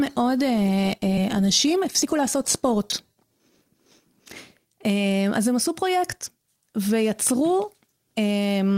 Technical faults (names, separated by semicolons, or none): skip ahead; jitter buffer speed-up; chunks out of order